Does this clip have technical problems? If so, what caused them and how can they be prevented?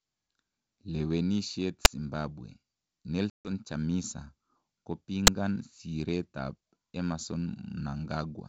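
Yes. At 1.85 s and again at 5.27 s there is a single sharp bang, each one a 10 ms block of invalid numbers at full scale. A calculation produced infinite or invalid values that were pinned to the extreme sample value for the whole block. Checking for invalid values and clamping or muting the affected block before output prevents this.

From 3.30 to 3.48 s the speech drops into a hard-edged silent hole, then returns with brief, slight distortion. This is packet loss on an ADPCM call. About 150 ms went missing, which fits roughly fifteen short packets. After the gap the decoder's predictor and step size no longer matched the sender's. Packet-loss concealment, with decoder-state resets or jitter buffering, prevents it.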